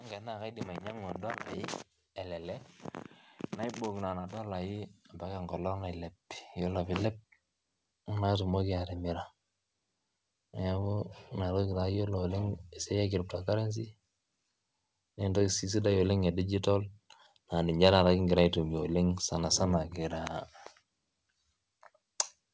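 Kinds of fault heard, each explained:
Automatic gain rising: The gain control judged the incoming level too low and kept turning its gain up, climbing by about 19 dB between 0.41 and 8.38 s. Because the whole signal is boosted together, the speech and the room noise behind it swell in step, so the quiet background grows steadily more present instead of staying fixed. The call path's wideband codec, with nothing above 8 kHz, carries that slow rise through unchanged.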